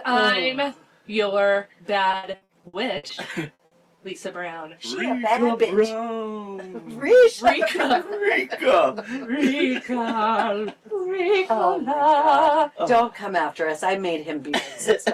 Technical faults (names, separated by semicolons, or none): repeated packet loss (robotic sound)